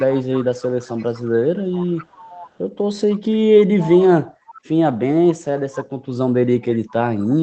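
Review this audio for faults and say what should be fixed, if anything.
Echo leak, 0.0–2.6 s and 4.29–4.61 s: a faint copy of the speech trails the original by about 505 ms, roughly 20 dB down, then quieter. The likely cause is far-end loudspeaker sound reaching that microphone and slipping past its echo canceller. A headset at the far end, or echo cancellation tuned to cover a half-second delay, would prevent it.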